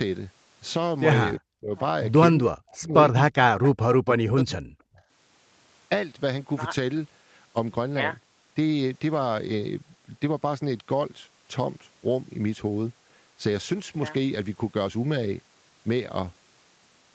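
Speech suppressed in double talk occurs at 1.38 to 1.74 s, 2.41 to 2.94 s and 3.32 to 3.62 s: the voice drops by roughly 40 dB, nearly vanishing. This is likely an echo canceller mistaking overlapping far-end talk for echo and attenuating everything.

An echo leak follows at 3.63 to 3.71 s, a brief, faint copy of the voice about 15 dB below it, arriving 345 ms late. Residual loudspeaker pickup likely slipped past the far end's echo cancellation and was returned.

Speech suppressed in double talk then recurs from 4.02 to 5.02 s, with the voice again cut by roughly 40 dB in patches.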